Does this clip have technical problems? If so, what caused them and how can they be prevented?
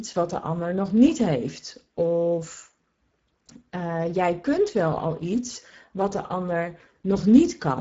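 Yes. Speex codec damage is plainly audible throughout the speech. This CELP coder has too few bits to model the excitation, which leaves a noisy, hoarse coloration. Nothing remains above 7.7 kHz, and the sound fits a bitrate near 10 kbps. To prevent it, encode at a higher Speex quality setting or use a modern speech codec such as Opus.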